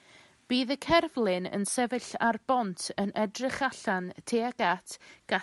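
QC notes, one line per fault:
No faults found; the only background is room noise sitting about 47 dB below the speech, which belongs to the recording space and not the signal chain.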